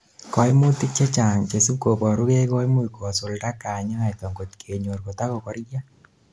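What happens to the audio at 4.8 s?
Nothing happens at 4.8 s: the speech carries on intact, with no dropout, click, distortion or other fault at that moment.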